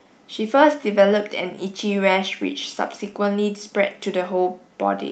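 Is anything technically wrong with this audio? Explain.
Yes. There is clock drift between sender and receiver: the sending device's clock runs roughly 5% slow relative to the receiver's throughout the clip. The jitter buffer keeps draining because samples arrive too slowly.

Repeated timing corrections run from 0.04 s to 4.99 s as the receiver compensates. It repeats short pieces to fill the gaps, stretching the speech to about 96% speed and adding roughly a fifth of a second in total. If audible at all, this comes across as small, unevenly spaced hiccups and a faintly dragging, unsteady tempo.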